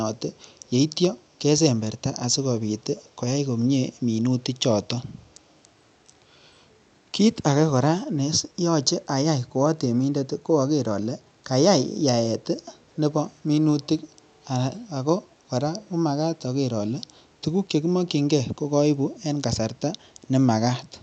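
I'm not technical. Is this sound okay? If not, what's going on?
No. There is an echo leak. Someone on the call was likely using a loudspeaker, and their phone or computer failed to fully cancel its own playback, so a little of the voice was sent back. You hear this as very faint, brief repeats of the speech arriving about 0.43 seconds late, at 0.61, 3.04, 13.8 and 15.3 seconds. Each lasts only a split second, like a soft ghost of what was just said.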